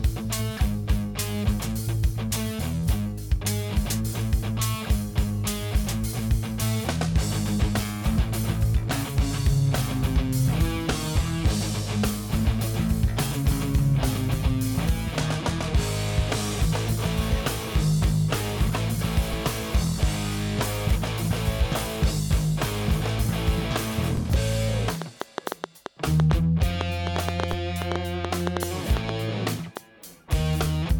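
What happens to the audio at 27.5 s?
At 27.53 s there's a DC step: the waveform's zero line jumps by about -20 dBFS, heard as a low thump, then decays away as a 20 Hz high-pass drains it. It lands inside a train of clicks running from 25.02 to 29.78 s, with around thirty irregular pops at roughly five per second that stand well above the sound. That's likely interference or a faulty connection.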